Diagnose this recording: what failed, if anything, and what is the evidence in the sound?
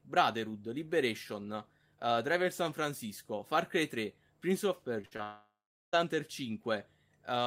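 Network stage, short concealed packet loss: brief smears at 5.01 to 5.05 s and 5.17 to 5.21 s, each about 20 ms of speech replaced by a continuation of the preceding sound. Unlike a burst, the patch is too short to fade, so it passes as a smear or wobble.

Network stage, burst of packet loss: from 5.05 to 5.13 s about 60 ms never arrived in time. The receiver stretched the last sound for roughly 56 ms while lowering its level, then jumped ahead. That audible decay and skipped span separate it from the single-packet patches.

Network stage, long network dropout: from 5.23 to 5.95 s the sound continues as a fading buzz or hiss, then goes silent for about 0.4 s before speech returns with roughly 0.7 s gone. This is likely a stall in incoming audio, not a mute, since the fade precedes the silence.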